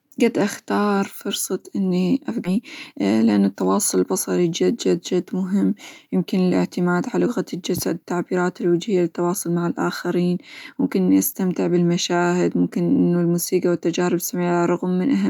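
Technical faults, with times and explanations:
2.45 s, skip ahead: right after "قد أختار فرصة إني" the speech jumps forward with no gap, the two sides butted together. Roughly 0.7 s of audio was dropped, either lost in transit or discarded by an overflowing jitter buffer while later audio was already queued.
2.55–4.72 s, jitter buffer speed-up: the speech sounds hurried but keeps its pitch, running about 8% fast until "جد جد مهم يمكن". The buffer held more audio than its target, so the receiver repeatedly trimmed short pitch-period pieces, removing roughly 0.2 s to cut the delay.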